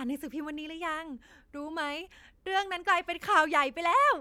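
Nothing stood out on listening to this short speech recording.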